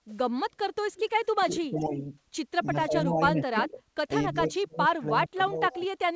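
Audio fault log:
0.10–0.18 s, 1.79–1.86 s, 3.63–3.67 s and 5.72–5.77 s: echo leak. Brief repeats of the speech trail it by 299 ms. The faintest is around 30 dB down and the loudest, at 3.63 s, only about 10 dB down. Likely a far-end loudspeaker echo the canceller failed to remove fully.
1.42–1.97 s, 2.70–3.85 s, 4.32–5.06 s and 5.25–5.82 s: speech suppressed in double talk. The speech sinks, dropping by roughly 15 to 25 dB at its deepest. This is likely the echo canceller clamping down while both sides spoke at once.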